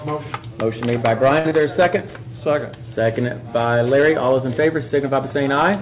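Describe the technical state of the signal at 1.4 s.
At 1.4 s the signal is in a short stall from a late packet, running from 1.39 to 1.46 s. A packet missed its playout time and the jitter buffer emptied, so the receiver held the last sound for 57 ms until the packet turned up, then resumed from the same point. Nothing is lost, but playback now sits 57 ms later, and the sound just before the gap is audibly drawn out for that stretch.

Right after, from 1.49 to 1.52 s, there is a short concealed packet loss. Here 40 ms of audio never reached the decoder in time. The receiver covered the hole with 21 ms of synthesised continuation of the preceding sound before blending back into real audio, and the playout delay came down by roughly 20 ms. The result is a brief smear where part of the sound is missing outright. Throughout, the G.711 A-law call path leaves nothing above 4 kHz.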